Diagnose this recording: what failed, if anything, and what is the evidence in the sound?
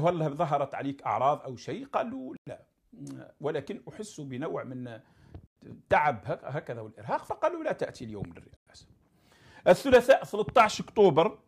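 A gap between chunks shows up at the playback or chunked-delivery stage: hard-edged silences of 100 ms at 2.37, 5.47 and 8.57 s, spaced every 3.1 s, so each 3 s chunk starts late. Unlike a dropout, no sound is missing; it resumes exactly where it stopped.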